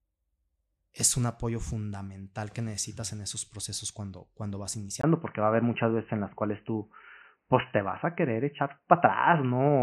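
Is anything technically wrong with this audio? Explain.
Yes. At 5.01 s, right after "procesos cuando cuando vas", the speech cuts out for about 20 ms, then continues to the end sounding dull and boxy. From there nothing is present above 3 kHz, the level shifts by a few decibels, and a faint new background noise sits far below the speech. This is an input switched to a poorer device, likely another microphone or a headset call profile with a narrower passband and its own noise floor.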